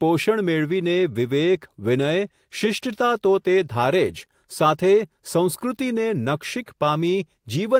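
No audible technical faults.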